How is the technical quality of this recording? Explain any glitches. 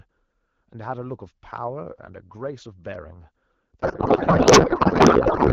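The recording has two short loud pops, and the final stretch turns into garbled noise, so the technical quality is poor.

Loud pops: At 1.58 to 1.60 s and 2.94 to 2.96 s, sharp single pops cut through the speech, which carries on beneath them. The second, at about 10 dB above the signal, is louder than the first at about 5 dB. Each is likely a brief voltage spike from a switch, a connector or static that the following circuitry shaped into a click.

Codec payload misread: From 3.82 s to the end, the speech turns to warbling, garbled noise that barely follows it. The call uses AMR wideband at 12.65 kbit/s, with only light codec damage before this point. The receiver is reading octet-aligned AMR frames as if they were bandwidth-efficient ones, so every field is taken from the wrong bit position.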